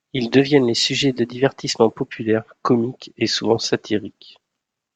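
From 0.39 to 2.14 s, before "comiques et souvent", speech runs 5.7% fast and about 97 cents sharp, then snaps back, likely a drift correction step. The detuning is steady throughout rather than wavering like flutter.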